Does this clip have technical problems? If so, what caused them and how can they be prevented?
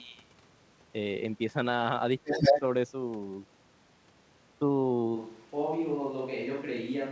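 Yes. From 2.24 to 2.6 s a second voice comes through, about 10 dB above the talker; this is likely the other side's voice leaking through from a loudspeaker the echo canceller failed to remove. Prevent it with headphones or a better-tuned echo canceller.

From 2.49 to 2.64 s the talker's own voice dips by about 10 dB for roughly 150 ms, likely speech suppressed in double talk as the canceller ducked both voices together. Headphones also prevent this, since the canceller then has no echo to fight.

From 5.17 s to the end the voice turns abruptly hollow and roomy, about 5 dB quieter, with room noise about 30 dB below speech, likely a switch to a distant microphone after the close one dropped out. Check the close microphone's connection and disable automatic fallback to another input during recording.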